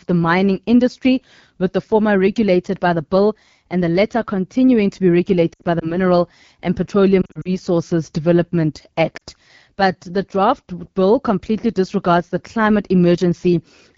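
Right through the clip, the speech has the rough, raspy edge of the AMR wideband (HD Voice) codec running at one of its lowest rates, which fits the 8.85 kbit/s mode. With so few bits for the pulse excitation, voiced sounds come out gritty, and the top band is just shaped noise.

Then there are lost AMR speech frames. Just after "latter continuing to be", from 5.53 to 5.94 s, about 100 ms drops out in scattered bursts, the longest run being 60 ms. The decoder keeps reusing its last settings at falling gain, so the sound warbles and drops to near silence in the longer runs. The same thing happens from 7.22 to 7.57 s, with about 140 ms lost in runs of up to 40 ms. At 9.17 s, a 40 ms gap gives a quick dip.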